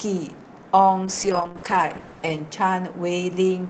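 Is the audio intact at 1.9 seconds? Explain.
No. At 1.9 seconds the speech is inside a call bitrate drop that runs from 1.06 to 2.51 s. The call's bandwidth estimate fell, so the Opus encoder had to code with far fewer bits. The sound fits a fall from 32 kbps to about 9 kbps, held at its lowest for roughly 1.3 s. The coding turns coarse and the highs are cut. The speech sounds rough, watery or muffled until the rate recovers.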